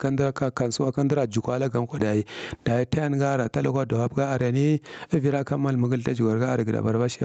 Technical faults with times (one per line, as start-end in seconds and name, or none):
0.00-7.25 gain pumping